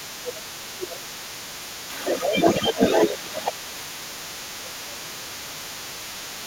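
From the start to the end, the other side's voice leaks through, only about 5 dB below the talker, likely because the echo canceller left loudspeaker pickup in the microphone. It appears as a second, overlapping harmonic pattern across the spectrogram. Speech is suppressed in double talk at 0.06–1.11 s, 2.04–2.35 s, 2.62–2.8 s, 3.09–3.3 s and 3.64–5.84 s, likely from the canceller ducking both voices at once. The voice sinks by about 10 to 15 dB, and the waveform envelope shows matching dips.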